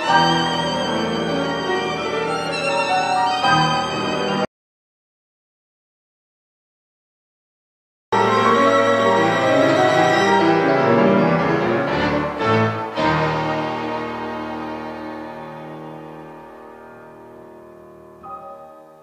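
Around 4.45 s the audio just drops out to silence and stays dead until 8.12 s, so roughly 3.7 s is gone, with no room tone at all in the gap. Most likely the input was lost, a disconnect or a stray mute, while recording carried on writing silence.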